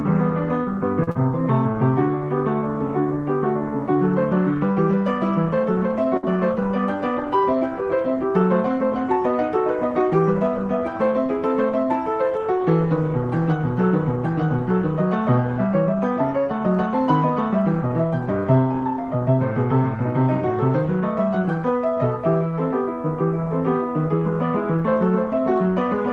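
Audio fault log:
1.03–1.09 s, short stall from a late packet: a packet arrived about 36 ms late and the jitter buffer ran dry, so the receiver held the preceding sound for 36 ms before resuming where it left off. Nothing is lost, but the sound drags briefly with a faint buzz or dip.
1.11–1.17 s, short concealed packet loss: about 40 ms of audio never reached the decoder, and the receiver bridged it with 38 ms extrapolated from the last sound before crossfading back. The result is a quick smear or wobble.
6.17–6.38 s, burst of packet loss: consecutive packets went missing, taking about 60 ms of audio. The receiver stretched the last sound for 58 ms while fading it down, giving a held buzz or decaying hiss, then picked up again with that stretch skipped.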